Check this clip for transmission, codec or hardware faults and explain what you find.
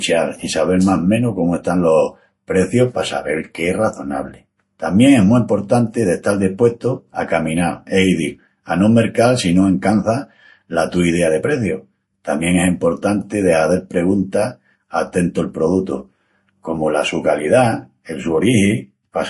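One codec fault runs through the whole clip. Transcoding between lossy codecs, throughout: nothing remains above 11.3 kHz and two kinds of compression artefacts overlap in the speech, likely Vorbis near 46 kbit/s re-encoded as MP3 near 48 kbit/s.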